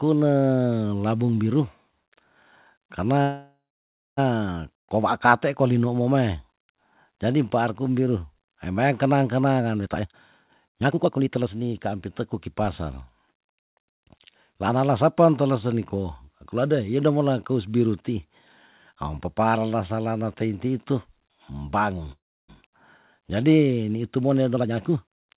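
A speech recording in which the sound stalls twice, at 3.22 to 4.19 s and at 22.12 to 22.50 s. Each time the last sound stretches into a fading buzz and then silence (about 0.6 s and 0.3 s of it), and the speech resumes where it stopped with nothing missing. This is a call audio freeze, likely from packets held up in transit while the jitter buffer ran dry. From 9.84 to 13.97 s, and again from 24.16 to 25.31 s, the speech sounds hurried but keeps its pitch, running at about 123% and 121% speed. That is a jitter buffer speed-up: the receiver trims short pitch-period slices to cut its backlog, roughly a second in the first stretch and around 0.3 s in the second. Throughout, the G.711 call codec leaves nothing above 4 kHz.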